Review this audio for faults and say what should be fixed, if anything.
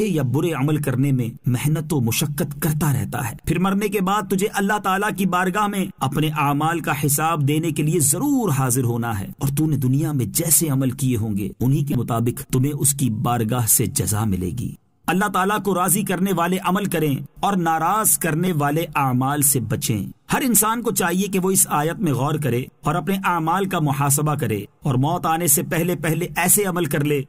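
Repeated buffer at 11.93 to 11.95 s and at 18.47 s: fresh audio arrived late, so the device replayed its last chunk. Each event is a click or brief buzz made of a tiny piece of sound looped with hard joins, which fits a 5 ms buffer. The first repeats four extra times and drops about 20 ms of audio, the second twice, losing about 10 ms. Fixing it means enlarging the playback buffer or giving the audio thread higher priority so it never runs dry.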